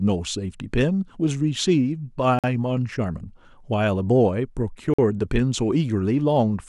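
Two short, hard-edged holes interrupt the speech, at 2.39 s and again at 4.94 s, each about 48 ms of silence. They are a gap between chunks: the audio was delivered in pieces about 2.5 s long, and each join leaves silence, with nothing missing.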